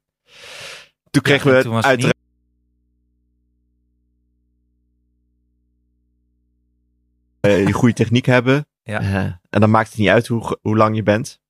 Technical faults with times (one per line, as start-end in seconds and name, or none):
2.12-7.44 audio dropout to a faint residue